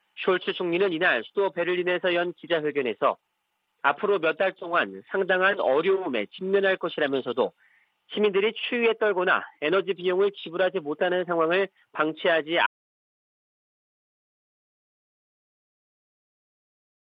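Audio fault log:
12.67 s to end, audio dropout to silence: the input was likely lost while writing continued, so the sound cuts abruptly to silence with no room tone.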